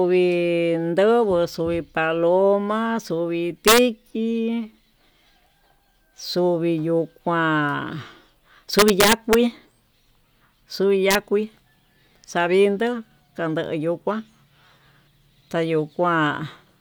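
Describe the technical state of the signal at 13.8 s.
At 13.8 s the speech signal is intact, with no dropout, clipping, distortion or other technical fault audible at that moment.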